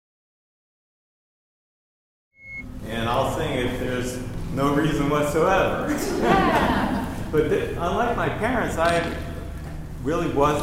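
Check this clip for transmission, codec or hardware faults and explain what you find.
One fault is audible, a loudspeaker feedback squeal from 1.97 to 2.65 s. A microphone is picking up the loudspeaker it feeds, and at 2.2 kHz the loop gain exceeds one, so that single tone reinforces itself. It swells over roughly a third of a second into a piercing whistle about 5 dB above the rest of the sound. The gentle fade-in that ends at 3.21 s is a separate, smooth edit.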